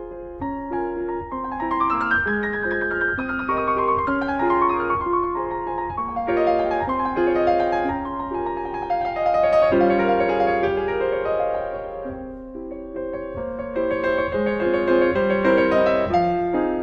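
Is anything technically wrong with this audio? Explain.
No, nothing technically wrong is audible here.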